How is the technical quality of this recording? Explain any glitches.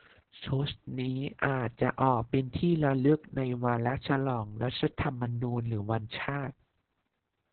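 The quality is poor throughout, because heavy Opus voice compression runs across the whole speech clip. The coder appears to be in its narrowband SILK mode at a very low rate, which fits roughly 6 kbps. Nothing reaches above 4.3 kHz, and the excitation is coded coarsely, so the speech sounds muffled, hoarse and slightly robotic.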